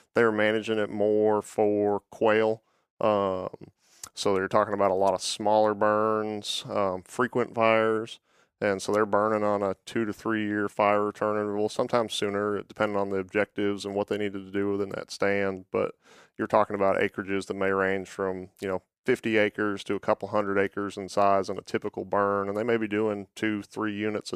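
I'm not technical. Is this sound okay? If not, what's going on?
Yes, nothing in this speech recording stood out as a problem on listening.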